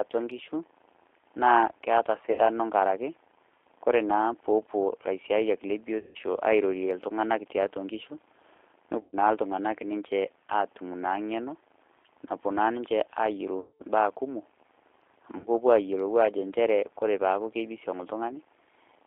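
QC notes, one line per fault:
throughout: G.729 codec at 8 kbit/s, band-limited to roughly 300 Hz to 3.6 kHz. The speech is rebuilt from a vocal tract filter, a pitch predictor and a few pulses per frame, so it comes out plainly rough, thin and synthetic.
2.32–2.42 s, 5.99–6.19 s (just after "naa peepuo ilaisiayiak le"), 9.01–9.16 s, 13.60–13.83 s, 15.38–15.48 s: VoIP packet loss concealed by the speech codec. About 60, 160, 120, 200 and 60 ms of audio are lost. The decoder extends its last pitch and filter at falling gain, producing a fading buzzy tone or coloured noise that stays weak briefly afterward.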